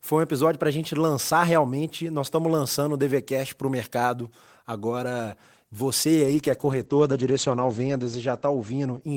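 From 6.25 s to the end, a call bitrate drop cuts the encoder from 32 to 12 kbps, at its lowest for 2.01 s. Speech turns rough and muffled as the bandwidth narrows from 20 kHz to 8 kHz, and the spectrogram shows a flat ceiling at 8 kHz.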